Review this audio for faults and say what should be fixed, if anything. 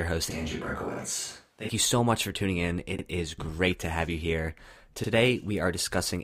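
From 0.30 to 1.69 s the speech turns hollow and roomy, with thinner bass and a room-noise floor roughly 35 dB below the speech, then snaps back. The likely cause is a switch to a distant microphone after the close mic's feed dropped out. Unlike a reverb or EQ change, the room tone and noise arrive and leave abruptly with the tonal shift, and there is little or no change in level. Monitoring the close mic's feed and routing it as the primary source would prevent this.

Overlapping chunks show up at 0.94–0.99 s, 2.99–3.04 s and 5.04–5.09 s. At each one, a 50 ms slice of audio plays twice, heard as a small stutter. The joins recur every 2 s, which fits processing in 2-second blocks where each new block starts 50 ms before the previous one ends. A dropout or packet loss would leave a gap, but here the sound repeats, and it does so on a fixed schedule. Aligning block boundaries so each chunk starts exactly where the last ended, or crossfading and trimming the overlap, would prevent it.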